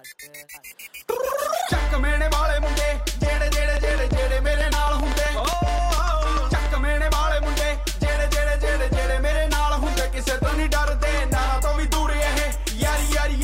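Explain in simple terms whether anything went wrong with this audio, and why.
From 3.77 to 6.67 s, a train of clicks ticks at an uneven pace, about seven a second, roughly twenty alike pops, likely from electrical interference, unlike random crackle.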